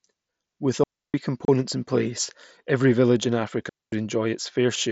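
At 0.84 to 1.14 s the sound falls into a digital wireless dropout. The receiver stops getting usable data and mutes for about 0.30 s, fading down very quickly into near silence and coming back the same way. No burst of hiss or static sits on either side of the hole, and that clean gap is what sets it apart from an analogue radio link losing signal.

At 1.45 to 1.48 s, just before "in place every village", there is unconcealed Bluetooth headset packet loss. A gap of about 30 ms, which fits four lost headset voice packets, is filled with silence or an idle pattern rather than patched over. Its edges are abrupt rather than faded, so it reads as a brief chop with a hard start and stop. It is far shorter than the wireless mutes, and it falls inside the mSBC link, whose 8 kHz wideband character carries on around it.

At 3.69 to 3.92 s, right after "place every village in", a second digital wireless dropout mutes the sound for about 0.23 s. 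It has the same quick fade into near silence and the same absence of noise at either edge.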